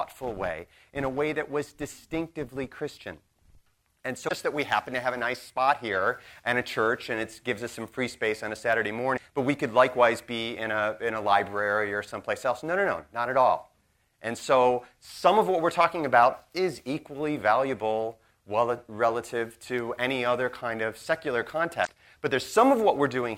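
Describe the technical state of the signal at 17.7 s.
At 17.7 s the signal is intact, with no audible fault at that moment.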